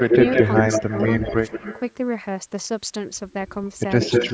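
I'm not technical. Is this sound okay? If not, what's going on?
No. From the start to 1.93 s, and again from 4.01 s to the end, there is an echo leak: a second copy of the voice trails the first by roughly a fifth of a second (174 ms early on, 189 ms at the end) and sounds about as loud as the original. The likely cause is someone listening on a loudspeaker whose microphone picked the voice back up, with the echo removal failing to cancel it, so it was sent back.

There is also speech suppressed in double talk, most likely from the same echo removal getting confused while both sides seemed to be talking. At 0.08 to 0.17 s the voice dips slightly. At 0.8 to 0.96 s and 1.27 to 1.67 s it drops much further, nearly vanishing in patches. The system couldn't tell the real talker from the echo, so it turned both down, and brief chunks of the voice sound muffled or go missing.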